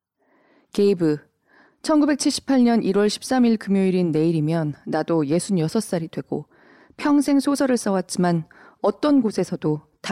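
No technical faults are audible.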